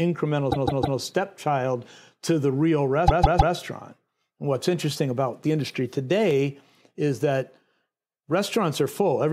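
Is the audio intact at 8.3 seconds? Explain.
No. Audio missing between chunks at 8.3 s: a few milliseconds of the speech are skipped and the two sides are butted together without silence. The likely cause is a recorder working in 2.0 s chunks losing material at a chunk boundary.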